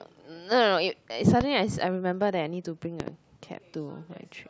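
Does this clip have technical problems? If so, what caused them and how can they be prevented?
Yes. There is a loud pop at 1.41 to 1.43 s, a single sharp click standing well above the speech level, and a second at 3.00 to 3.10 s, heard as two pops in quick succession, somewhat less prominent than the first. In both, the speech continues underneath. The likely cause is a sudden voltage step or pulse, from a connector, switch, static discharge or driver glitch, entering the signal chain. Secure cables, avoid switching during recording, and control static to prevent it.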